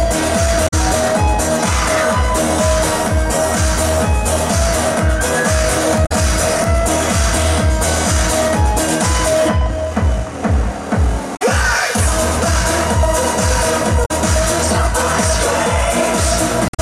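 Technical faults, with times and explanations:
0.64–0.74 s, 6.02–6.12 s, 11.33–11.42 s, 14.02–14.11 s and 16.65–16.80 s: damaged data in a compressed stream. Each burst, roughly a tenth of a second (the last about 0.14 s), is corrupted bytes the decoder cannot read correctly, so it outputs garbled frames and loses sync until it finds the next valid frame header. This produces a short chirp or blip in place of the sound.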